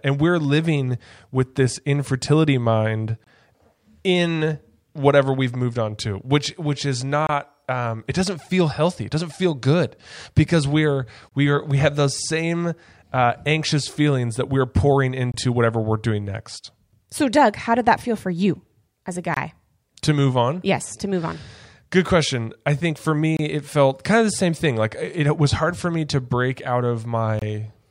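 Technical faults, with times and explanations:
3.24, 7.27, 11.29, 15.32, 19.34, 23.37 and 27.39 s, gap between chunks: the speech stops dead for about 25 ms every 4 s, for example right after "with this infertility mind", between "feelings that we're pouring" and "whatever we're doing next", and after "for you as a". The audio was delivered in 4-second blocks with a sliver of silence inserted at each join, so nothing is lost, but each seam becomes a short hole with abrupt edges.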